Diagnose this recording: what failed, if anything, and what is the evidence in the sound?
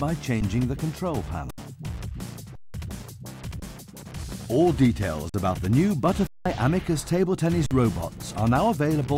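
Seven brief freezes, where the sound stops dead on a flat level, then resumes: 0.41 s, 1.51–1.58, 2.55–2.74, 3.60–3.62, 5.29–5.34, 6.27–6.46 and 7.66–7.71 s. This is an underrun with held sample at the driver or buffer stage. The converter held its last value while the buffer was empty, and the longest gaps fit 8192-sample blocks.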